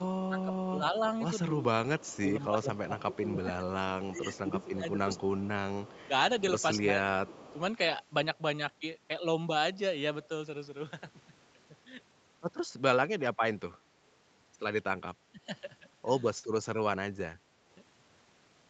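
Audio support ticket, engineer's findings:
Speech suppressed in double talk: level dips of up to about 15 to 20 dB, in pieces, at 0.0–5.1 s (about 3 s affected), 6.04–7.57 s, 15.23–15.41 s and 16.62–17.58 s. Likely the echo canceller attenuating the near talker while the far end speaks.

Echo leak: a faint delayed copy of the talker at about 25 dB below speech and 204 ms behind, at 1.99–3.21 s, 4.35–6.05 s and 7.42–7.58 s. Likely a far-end loudspeaker echo that the echo canceller did not fully remove.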